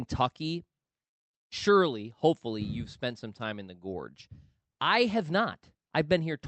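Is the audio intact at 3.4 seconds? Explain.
Yes, at 3.4 seconds the speech is intact, carried through the Opus call path with only its ordinary coding and a band limit near 8 kHz.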